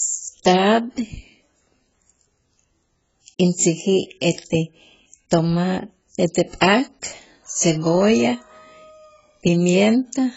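From start to finish the speech has nothing above about 7.7 kHz, with the artefacts of the earlier encoding still present. The likely cause is low-bitrate audio saved at a high bitrate: the damage fits a very low-bitrate AAC pass, later re-encoded as high-bitrate MP3 that cannot restore what was lost. Unlike a simple low-pass filter, the cut-off comes with codec artefacts. Unlike a plain low-bitrate file, the later encode adds almost no damage of its own.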